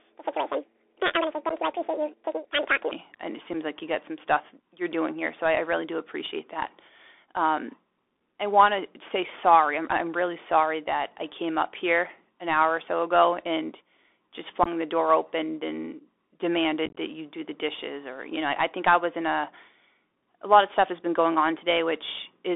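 Speech carried over a Bluetooth CVSD headset codec at 64 kbps, with the band held to roughly 300 Hz to 3.5 kHz, scratchy sibilants and a granular hiss under everything. From 0 to 2.91 s the audio runs at 1.89 times normal speed, raised about ten semitones and hurried, likely a section at the wrong speed from a clock mismatch during playback or editing. Unconcealed Bluetooth headset packet loss leaves abrupt holes at 1.49–1.52 s (11.2 ms missing) and 3.53–3.55 s (7.5 ms). Worse scattered bursts follow at 14.63–14.68 s (22.5 ms lost) and 16.86–16.97 s (78.8 ms lost, longest gap 22.5 ms), which sound like crackle and chopping.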